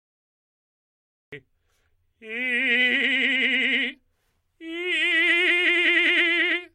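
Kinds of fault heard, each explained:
Cut-off start: digital silence until 1.33 s, then the music jumps in mid-sound with no attack, because capture began after playback was already underway.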